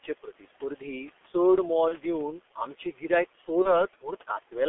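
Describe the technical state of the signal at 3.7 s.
At 3.7 s the signal is inside a stretch of VoIP packet loss concealed by the speech codec, running from 3.62 to 3.86 s, just after "दिवन आमचें गिरायक". A single 30 ms frame went missing, and the decoder filled the gap by extrapolating its last pitch and vocal-tract filter at falling gain. The result is a stretched, smeared sound that fades. Because each decoded frame depends on the previous one, the degraded sound persists well past the lost 30 ms, to about 3.86 s.

Underlying this, as across the whole clip, is the G.723.1 codec running at 6.3 kbit/s over a line band of roughly 300 Hz to 3.5 kHz. The heavy codec damage gives a muffled, hoarse quality with blurred consonants. Its 30 ms frames and slow model updates explain why one lost packet leaves a concealment tail several frames long.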